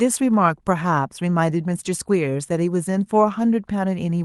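No technical faults are audible in this speech.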